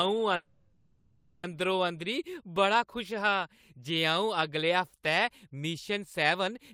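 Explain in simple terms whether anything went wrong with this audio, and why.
Something did go wrong, early in the speech. From 0.35 s to 1.45 s there is a call audio freeze. The last sound is held and stretched into a fading buzz for about 1.1 seconds. The likely cause is that network packets were held up, so the receiver's jitter buffer ran empty. The receiver filled the wait with that buzz. When the audio resumes, it picks up where it stopped. Nothing is lost, but everything after arrives about a second late.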